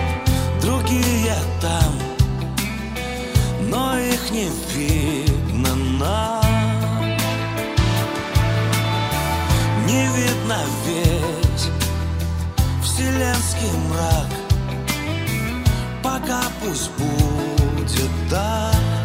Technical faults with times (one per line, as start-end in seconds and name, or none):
none